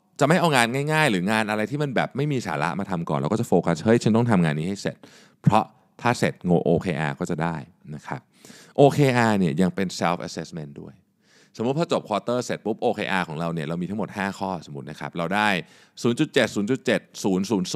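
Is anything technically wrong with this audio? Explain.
No, nothing is technically wrong.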